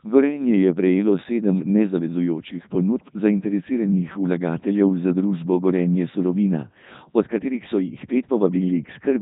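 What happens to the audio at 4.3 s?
At 4.3 s you're hearing the Codec 2 vocoder, which runs through the whole clip: speech rebuilt from sine waves, robotic and buzzy, nothing above 3.8 kHz, which fits its 3.2 kbit/s mode.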